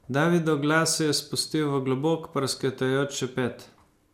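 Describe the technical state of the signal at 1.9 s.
At 1.9 s, as throughout, the speech likely went through about seven MP2 passes at 128 kbit/s, giving generation loss: swirly, hollow, smeared attacks, and nothing above 16.7 kHz.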